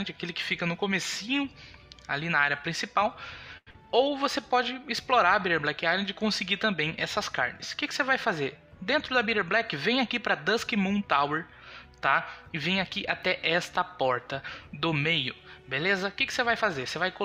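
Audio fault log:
3.57–3.69 s, short stall from a late packet: a packet arrived late and the jitter buffer ran dry, so the receiver held the last sound for 92 ms until the data came in. Playback then resumed where it left off, so nothing is lost, but the sound lingers unnaturally.
3.71–3.76 s, skip ahead: right after the stall, with later audio already queued, the receiver discarded a stretch to catch up. About 70 ms of sound is gone, bridged by only 33 ms of fill, so the audio jumps forward and cuts delay by roughly 50 ms.
3.82–4.43 s, jitter buffer slow-down: the buffer was short of reserve after those disruptions, so the receiver repeated individual pitch periods and slivers of pauses to add 48 ms. The sound plays at 93% speed with unchanged pitch, so it is drawn out.
15.89–16.97 s, jitter buffer speed-up: here the buffer held more audio than its target, so the receiver trimmed short pitch-period pieces, removing about 70 ms in total. 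The sound plays at 107% speed with unchanged pitch, so this stretch comes across as hurried.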